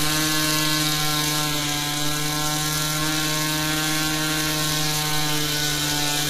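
Throughout, likely HE-AAC compression at a low bitrate, around 20 kbps, rebuilds the treble from copied lower bands, leaving gritty, metallic highs with nothing above 14.9 kHz.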